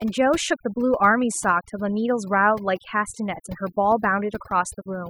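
Overdone noise removal runs throughout the speech: an over-aggressive noise reducer gates frequency bands near its noise estimate, leaving twinkling near-silence between phrases.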